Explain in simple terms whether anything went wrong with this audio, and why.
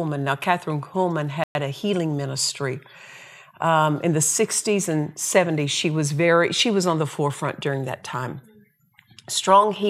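A Bluetooth stall likely held up the audio, so the speech cuts to silence for 0.11 s at 1.44 s, then resumes with "a healing ministry".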